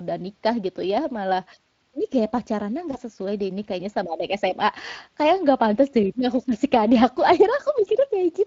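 Speex codec damage runs through this whole speech recording, plainly audible throughout at a setting around 20 kbps. VoIP packet loss concealed by the speech codec occurs at 2.91–2.98 s, between "malah ini gaya pacarannya" and "sesuai deh ini kayaknya": one 20 ms gap is bridged by extrapolating the last pitch and filter, giving a brief fading smear whose distortion lingers after.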